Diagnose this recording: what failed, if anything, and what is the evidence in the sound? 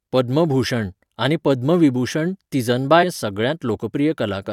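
At 3.02 s the speech jumps abruptly forward with a brief blip, and the flow of the talk resumes from a later point. This is likely a stream segment skipped at the playback stage: one segment of the segmented stream failed to load, so the player moved on to the next and that stretch of programme is missing.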